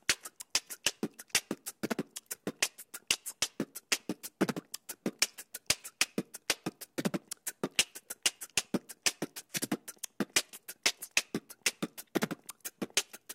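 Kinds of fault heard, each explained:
No technical faults can be heard in these sounds.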